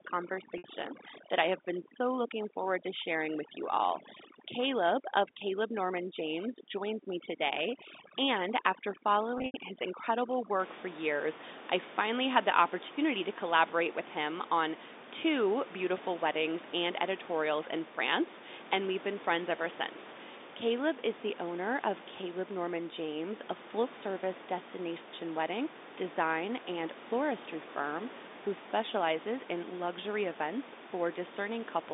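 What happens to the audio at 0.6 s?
A brief buzzy hold cuts in from 0.58 to 0.64 s. For about 60 ms the sound freezes into a repeated, slightly mechanical tone before normal speech resumes. This is packet loss with pitch repetition. Audio went missing in transit, a gap that fits three 20 ms packets, and the receiver covered it by looping the last pitch period instead of leaving silence. The repeated period fades out over about 50 ms, and speech returns with a short cross-fade.

Under that glitch, and across the whole opening from 0.0 to 10.6 s, up to just before "for years I finally", the speech is heavily processed. The background drops and breaks up into twinkling specks. This is overdone noise removal. A noise suppressor set too aggressively cuts individual frequency bands whenever they come close to its noise estimate, and the quieter parts of the speech get removed along with the room noise.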